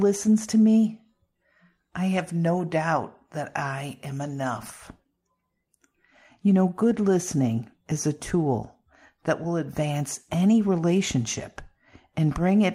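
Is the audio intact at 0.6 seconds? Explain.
Yes, at 0.6 seconds the audio is intact, with no fault audible at that moment.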